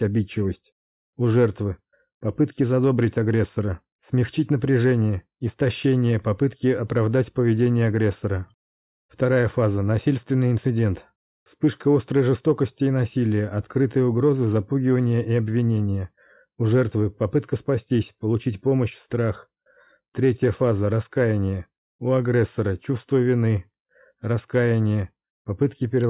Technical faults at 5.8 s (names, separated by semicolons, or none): none